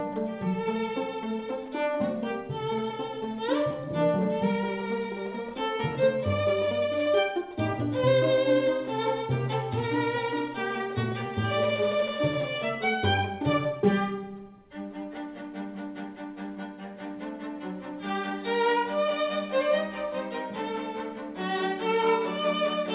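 No faults can be heard anywhere in this recording.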